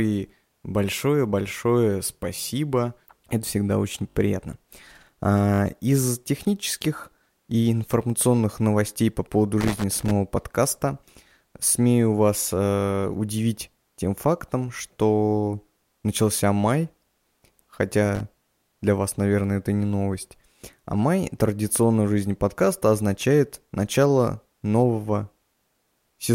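Repeated buffer at 2.36 to 2.38 s, 4.10 to 4.16 s just after "всегда очень", and 5.54 to 5.60 s: new audio failed to arrive in time, so the device replayed its last 20 ms block. The first event repeats it once and the other two repeat it three times, each with a hard join. This produces a brief stutter or buzz in the speech, with the timeline stretched rather than any audio lost.

Loose connector crackle at 9.60 to 10.11 s, between "информационных новостей по поводу" and "подкаста смею вас э", and again at 18.15 to 18.21 s: a worn or dirty contact rapidly made and broke as it moved, chopping the signal on and off. Each event sounds as an irregular burst of scratchy crackle. The first lasts about half a second and the second is a short burst of roughly 60 ms.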